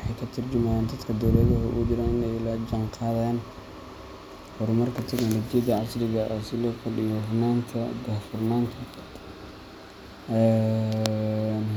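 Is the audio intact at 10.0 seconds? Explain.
Yes, at 10.0 seconds the speech plays through intact, with no dropout, glitch or other fault to be heard at that point.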